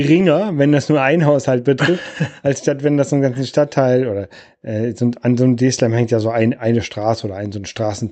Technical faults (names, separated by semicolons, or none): clock drift between sender and receiver; repeated timing corrections